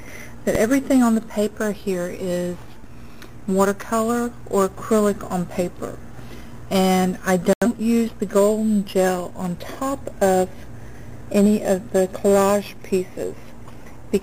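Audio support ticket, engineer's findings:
Digital broadcast dropout, 7.53 to 7.67 s: receiver mutes after corrupt or missing frames, programme resumes later, intervening material lost. Waveform shows flat silent gap, spectrogram a clean vertical blank band. Gap length fits roughly two lost frames.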